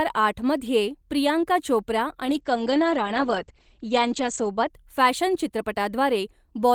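At 2.26 s there's a call bitrate drop that lasts until about 4.75 s. The connection's bandwidth estimate fell, so the encoder was pushed down to far fewer bits, which fits a drop from around 32 kbps to 12 kbps. For about 2.2 s the speech loses its top end, with the band narrowing from 20 kHz to 8 kHz. It sounds muffled, rough and watery, then opens back up once the rate recovers.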